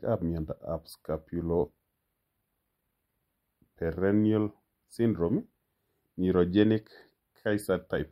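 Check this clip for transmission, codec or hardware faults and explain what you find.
One fault runs through the whole clip. Channel delay (comb filtering) gives the speech a hollow, phasey sound, because one channel lags by a few samples, well under a millisecond, and mono summing cancels a notch near 7 kHz.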